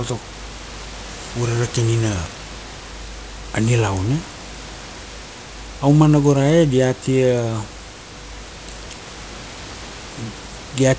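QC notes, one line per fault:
Nothing to flag here; the speech comes over a G.722 call path with nothing above 8 kHz, and the room noise sits about 23 dB below it.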